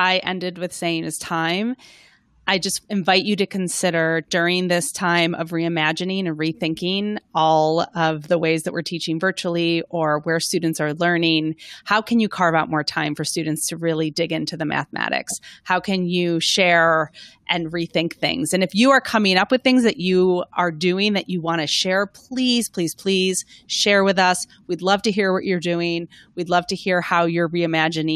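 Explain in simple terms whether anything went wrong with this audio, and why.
Nothing went wrong with this audio; no faults can be heard anywhere in it.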